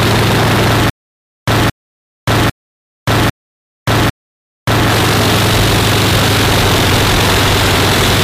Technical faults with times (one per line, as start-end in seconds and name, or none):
0.90-4.90 stutter with silent gaps